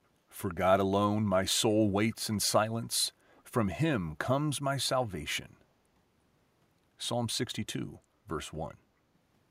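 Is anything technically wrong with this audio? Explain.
Yes: brief echo leak at 2.12–2.16 s and 3.31–3.43 s, a very faint copy of the speech about 349 ms late, likely from a loudspeaker echo canceller missing residue, showing as weak repeated spectrogram patterns.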